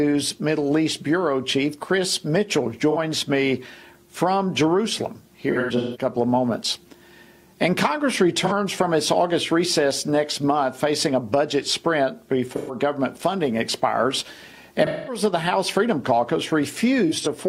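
AAC frame loss with concealment hits at 2.91–2.98, 5.51–6.05, 8.46–8.52, 12.53–12.75, 14.86–15.22 and 17.07–17.27 s. Each time the decoder papers over missing frames by reusing the last good spectrum, so you get short smeared, phasey patches.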